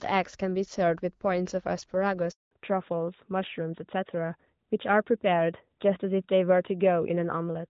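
At 2.31 s the speech dies away within a few tens of milliseconds into a 200 ms handover gap, a clean silence rather than the clicks or garble of scattered packet loss. From 2.51 s to the end, a fallback to narrowband strips everything above 4 kHz, leaving a duller, rougher speech sound than the lightly coded HD Voice before it. The change is a permanent switch, not a passing muffling.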